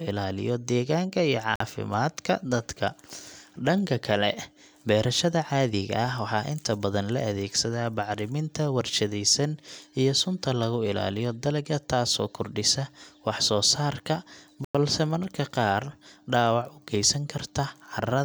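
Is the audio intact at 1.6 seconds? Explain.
No. At 1.60 s the speech is inside a 48 ms dropout running from 1.56 to 1.60 s. The sound cuts to silence, then resumes. This points to a likely Bluetooth stall: delayed packets let the headphones' buffer run empty, pausing playback.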